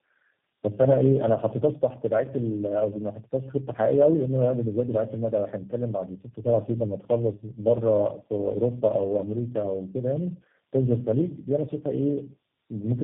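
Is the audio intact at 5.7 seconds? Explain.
No, not really. At 5.7 s the speech is carrying tandem speech coding, which runs through the whole clip. It sounds like four low-rate speech coders in a row, each re-encoding the previous one's already damaged output, so the losses stack up. You get rough, muffled, warbly speech with nothing above about 3.8 kHz, which fits a chain that starts and ends on something like G.729A.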